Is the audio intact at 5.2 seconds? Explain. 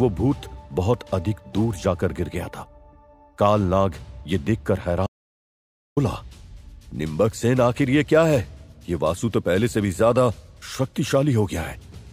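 No. The input was likely lost while the recorder kept writing silence: an audio dropout to silence from 5.07 to 5.97 s, a 0.9 s dead gap with no room tone.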